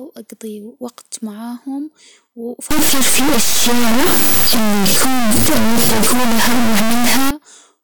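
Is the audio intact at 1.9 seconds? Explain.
Yes, at 1.9 seconds the speech is intact, with no audible fault at that moment.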